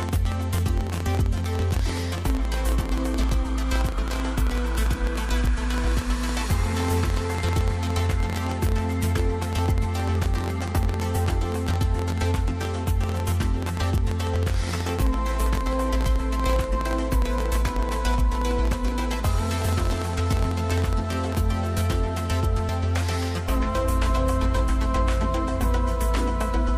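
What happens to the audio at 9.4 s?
At 9.4 s you're inside a train of clicks running from 0.03 to 21.36 s: irregular ticks at about 12 per second, poking well above the sound, likely interference from nearby equipment.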